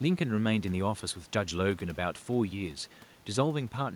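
No technical faults are audible.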